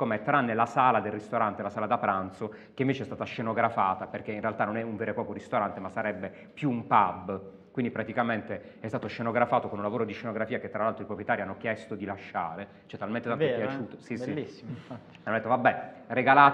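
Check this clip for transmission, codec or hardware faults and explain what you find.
The signal holds together as a continuous, stable recording, with nothing audible that points to trouble in how it was captured, encoded or carried.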